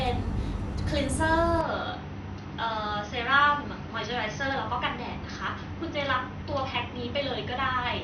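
At 1.61 s the speech abruptly turns duller and a bit quieter, with nothing left above 6.2 kHz and a faint new noise underneath. There's no gap at the change, and it stays that way to the end. It's likely an input switched to a poorer device.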